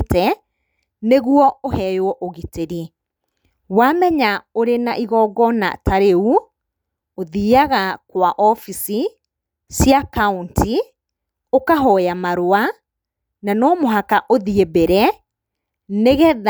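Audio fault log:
No technical faults can be heard anywhere in the speech recording.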